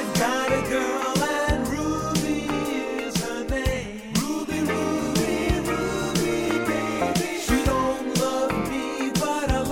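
No technical faults are audible anywhere in the audio.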